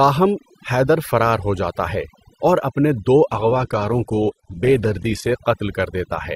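From start to finish the background is pushed to near silence except for twinkling specks. That is overdone noise removal: a noise reduction stage set too aggressively kept switching individual frequency bands down or off whenever they came close to its noise estimate, and the quieter parts of the voice were cut away with the noise, leaving those isolated sparkles behind.

From 3.31 s to 5.31 s the quality drops abruptly with no gap. The treble vanishes above 12.1 kHz and coding artefacts rise, before the sound just as suddenly regains its clarity. This is an adaptive stream at a lower bitrate: the player switched to a leaner encoded version for those two seconds, which fits a step down from about 64 kbit/s to about 12 kbit/s Opus, then switched back.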